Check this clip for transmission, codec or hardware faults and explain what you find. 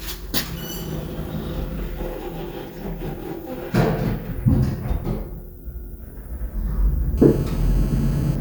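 One hardware fault is audible. From 7.18 to 8.36 s, GSM phone buzz: a nearby phone on a call bursts 217 times per second, rectified into a steady raspy harmonic buzz about 20 dB below the sound.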